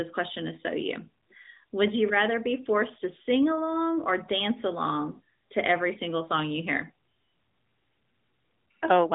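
Nothing technically wrong turns up in this speech clip, which comes over a 12.2 kbps AMR-NB mobile codec link, so the sound stays within the narrow telephone band and nothing reaches above about 3.8 kHz.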